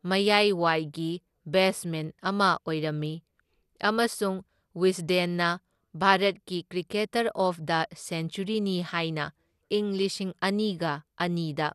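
MP2 compression runs throughout the speech. The sound is dull, with nothing above about 12.2 kHz, and carries a plainly audible gurgling, granular texture. This likely comes from MPEG Layer II coding with too few bits, which fits a rate near 80 kbps, so upper sub-bands drop out and flicker while the rest are coarsely quantised.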